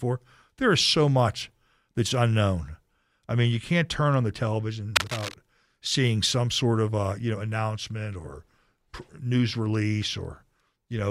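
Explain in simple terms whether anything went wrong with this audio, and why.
A worn cable, plug or control was likely moved while recording, so its electrical contact kept flickering. That causes cable scratch noise: from 4.95 to 5.34 seconds, a loud burst of scratchy, rustling crackle sits over the speech, nearly as strong as the speech itself.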